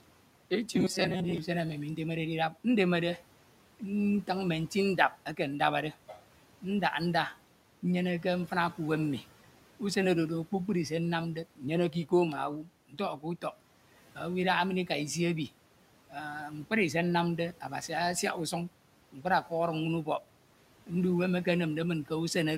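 From 0.73 to 1.38 s, just before "usem emi mi ndemede", the speech turns into a rigid, metallic buzz at 188 Hz. This is robotic sound from repeated short buffers. About half the audio is likely replaced by repeats of a roughly 5 ms slice.

At 12.89 to 13.0 s and again at 19.12 to 19.25 s, the speech drops by about 11 dB and about 9 dB. The noise suppressor cut the speech, mistaking it for the room noise, which sits about 23 dB below. Each time, roughly a tenth of a second sounds swallowed.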